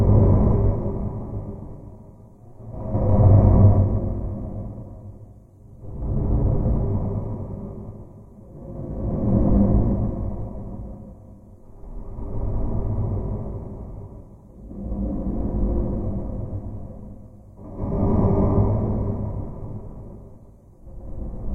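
No technical faults are audible anywhere in this recording of sounds.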